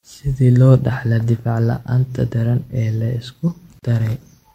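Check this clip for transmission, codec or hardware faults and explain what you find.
One fault is present in this speech clip: a gap at a join of encoded pieces, from 3.79 to 3.83 s. Separately encoded segments were joined untrimmed, so encoder start delay and last-frame padding remain, opening a 35 ms silence with smeared edges before the speech resumes where it stopped.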